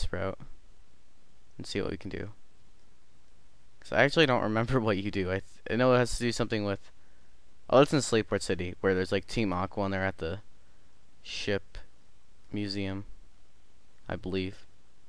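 No technical faults can be heard anywhere in the clip. Nothing in the sound points to a playback, transmission or processing problem at any moment.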